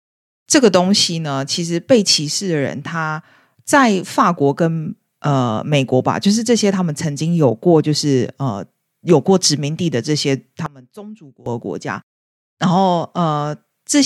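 From 10.66 to 11.46 s the speech drops by about 20 dB to a faint copy, with the centred voice and low end nearly gone. The likely cause is one channel inverted: reversed polarity on one stereo side cancels the shared signal when summed to mono.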